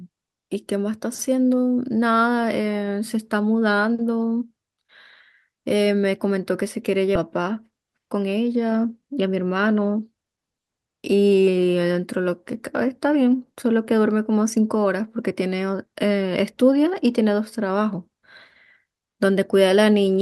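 At 7.15 s the speech skips ahead. Roughly 0.7 s of audio never plays. The two sides of the jump are joined directly, with no silence or fill between them. The stretch was dropped while later audio was already queued, so playback simply resumes further on. The listener hears an abrupt splice, and the missing speech is gone for good.

Jitter buffer speed-up follows twice. From 7.27 to 8.24 s the speech runs about 11 percent fast. From 9.02 to 10.38 s it runs about 13 percent fast. The buffer was holding more audio than it wanted. The receiver trimmed many tiny pieces, each a pitch period or so long. Around a tenth of a second goes in the first stretch, and around two tenths in the second. Pitch stays the same, but the delivery sounds hurried.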